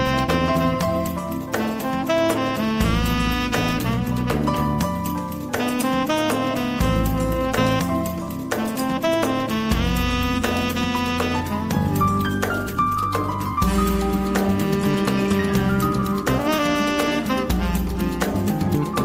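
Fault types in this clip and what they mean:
Skip ahead: At 7.8 s playback jumps forward with no gap to cover it. About a second of audio was discarded rather than played. The sound on either side of the cut is joined almost directly, so the jump is abrupt. This also shortens the delay between sender and listener by roughly a second. Whatever fell in that stretch is simply gone.
Jitter buffer speed-up: Four stretches play slightly fast while the pitch stays the same: 8.19 to 10.30 s, 12.11 to 13.60 s, 14.52 to 15.39 s, and 16.24 to 18.02 s. The rate rises by between 3 and 7 percent. The receiver trims many tiny pieces, each one or a few pitch periods long, to reduce excess buffered delay. About a tenth of a second is removed in each of the first two stretches and a bit less in the last two. The second and third stretches, at 5 and 7 percent, sound hurried.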